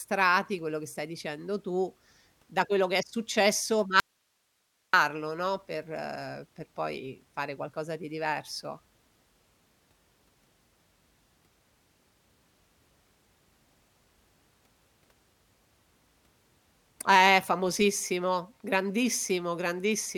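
At 4.0 s the speech cuts out abruptly for 0.93 s, leaving only hiss some 45 dB below it until 4.93 s. This audio dropout to a faint residue is likely a lost signal with the path after it still live. The instant cut and lingering hiss set it apart from a natural pause or fade.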